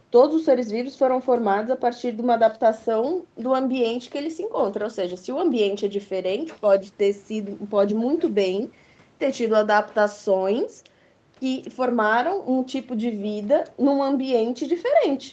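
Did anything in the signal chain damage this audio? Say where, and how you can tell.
No, nothing in the signal chain damaged this speech.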